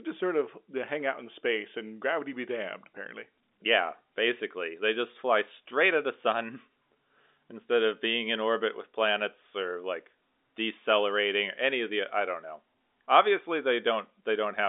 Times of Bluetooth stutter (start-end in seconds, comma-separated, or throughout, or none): none